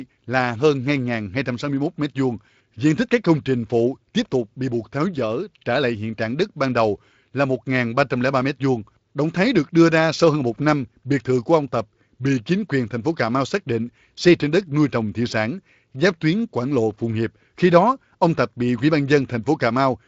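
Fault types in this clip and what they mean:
No faults can be heard in this speech. The Speex coding leaves only light traces, and nothing reaches above about 7.7 kHz.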